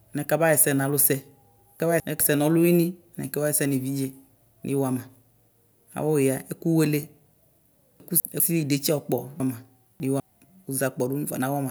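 Chunks out of order occur three times in this speech. From 1.8 to 2.2 s and again from 8.0 to 8.4 s, a 200 ms chunk plays one slot late, so two adjacent chunks swap places. From 9.4 to 10.2 s, a chunk arrives three slots late and plays after the three that should follow it. Nothing is missing, but each reordering produces a jumbled stretch bounded by three hard joins.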